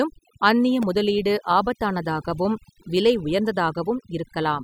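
Overdone noise removal runs through the whole recording. Set too aggressively, the noise reduction shuts off individual frequency bands whenever they sit close to its noise estimate, taking soft parts of the speech with them. The background collapses into near silence flecked with twinkling specks.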